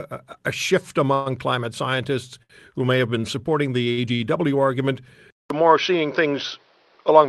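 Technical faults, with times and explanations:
1.13 to 1.28 s, call audio freeze: Packets were likely held up in transit, leaving the jitter buffer empty for about 124 ms. The receiver fills the wait by extending the last speech sound into a fading buzz instead of going silent. When the packets arrive, playback resumes from the point where it stopped. Nothing is lost, but the speech is pushed later by those 124 ms, so a stretched, smeared pause appears.
2.43 to 2.52 s, 3.92 to 3.99 s and 4.15 to 4.22 s, short stall from a late packet: Each time, a packet misses its playout slot, the jitter buffer runs dry, and the receiver holds the current sound until the packet turns up. The holds last about 70, 50 and 42 ms. Each is heard as a briefly prolonged sound with a slight buzzy dip, after which the speech continues intact but a little later.
5.30 s to the end, input switched to a poorer device: The capture input likely changed mid-recording to a lower-quality microphone or a headset call profile. 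The switch is marked by about 200 ms of silence. After it, nothing above 6 kHz is present, compared with the roughly 12 kHz band the Opus call path carries before the switch, so the speech turns dull and boxy. The overall level stays about the same, but a new background noise comes in, well below the speech.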